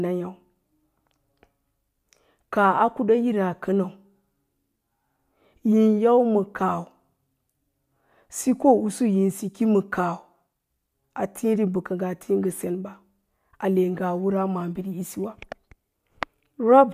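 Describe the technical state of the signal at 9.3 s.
At 9.3 s the speech signal is intact, with no audible fault at that moment.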